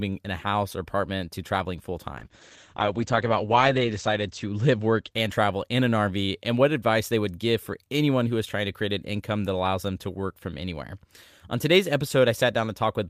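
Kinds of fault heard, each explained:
Call bitrate drop: after "apartment to traveling full" the speech turns coarse and muffled as the encoder falls from 48 to 10 kbps, losing everything above 8 kHz until about 5.8 s.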